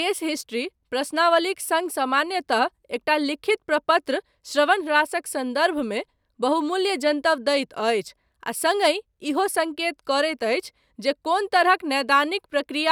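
A short bit of speech, and nothing technically wrong turns up anywhere in it.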